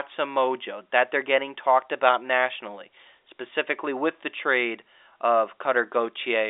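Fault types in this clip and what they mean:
No faults are present in the recording. The speech comes over a G.711 telephone line, with energy confined to roughly 300 Hz to 3.7 kHz, nothing above 3.8 kHz, and a sound that fits the standard 64 kbps A-law format.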